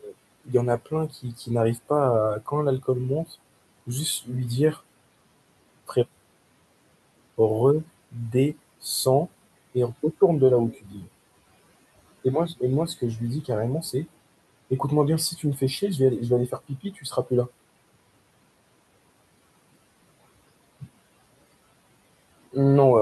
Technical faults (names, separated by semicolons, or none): speech cut by the noise suppressor